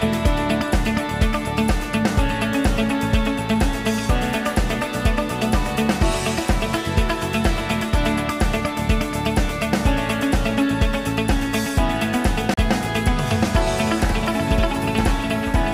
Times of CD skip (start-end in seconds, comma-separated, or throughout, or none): 12.54-12.57